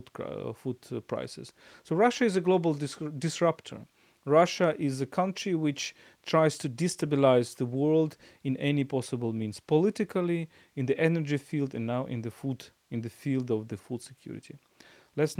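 A speech recording with nothing technically wrong with it.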